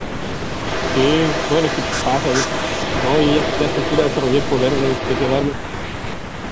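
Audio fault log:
0.63–5.46 s, echo leak: a distinct second copy of the speech follows the original by about 446 ms, only slightly quieter, likely from a far-end loudspeaker whose echo canceller let its own pickup return. The fixed lag separates it from reverberation, which smears instead of repeating.
5.48–6.52 s, speech suppressed in double talk: for about a second the speech drops sharply, at its deepest nearly to silence, likely because the echo canceller treated overlapping talk as echo and turned everything down. Unlike a network dropout, the loss follows the overlap.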